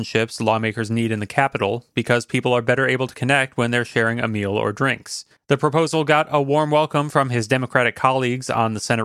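Nothing in the speech stood out as a technical problem on listening.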